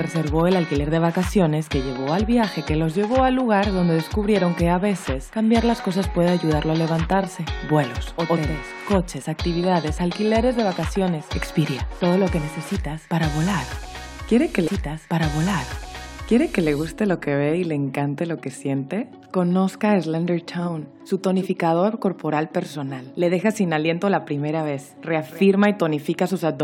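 At 14.66 s a stream segment repeats: about 2.0 s replays until 16.66 s after a small blip, visible as duplicated waveform and spectrogram blocks.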